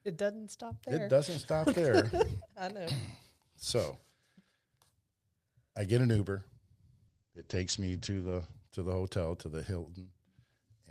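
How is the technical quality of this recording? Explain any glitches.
There is one glitch. From 7.08 to 8.59 s, just before "to the hotel to", the speech turns muffled and rough. This is a call bitrate drop: the encoder starved of bits, consistent with a fall from 48 to 12 kbps, and its top band shrank from 20 kHz to 8 kHz.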